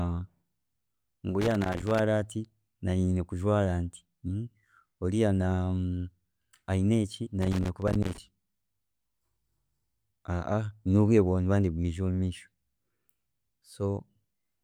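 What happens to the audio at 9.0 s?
Nothing goes wrong at 9.0 s; the speech runs through that point intact, with no dropout, click, distortion or other audible fault.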